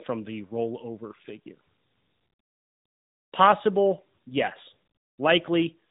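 Throughout, tandem speech coding: two speech coders in a row, apparently ADPCM then AMR-NB, compound their damage, leaving rough, warbly, muffled speech with nothing above 3.8 kHz.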